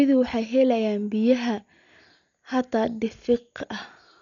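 From start to finish the speech sounds dull and boxed-in, with nothing above about 6.9 kHz, and there's a rough, fluttery grain hanging around the voiced parts. That's likely Dolby Digital compression, and heavy damage at that, which fits a starved bitrate around 48 kbps: the encoder narrowed the band and left lots of frequency lines without mantissa bits, so the decoder filled them with dither noise, hence the flutter.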